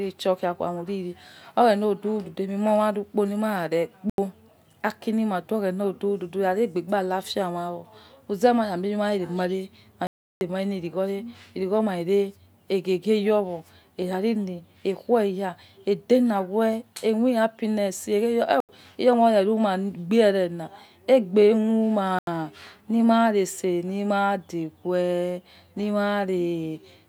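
At 4.10, 10.07, 18.60 and 22.19 s the speech drops into blocks of digital silence, where late buffer fills left zeros. The blocks last 85 ms, except about 340 ms at 10.07 s. Unlike a faded dropout, each block has abrupt edges.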